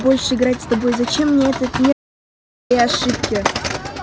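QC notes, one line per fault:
1.93 to 2.71 s, audio dropout to silence. The speech cuts off mid-flow and returns 0.78 s later. The gap is silent, with no room tone. The input was likely lost while zeros kept being written. That stretch is gone.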